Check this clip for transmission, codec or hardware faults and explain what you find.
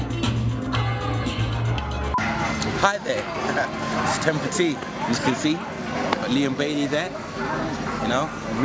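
Nothing stood out on listening; the sound carries the usual character of call microphone processing, with its highest content stopping around 8 kHz and the lowest bass trimmed away, which is normal for that path.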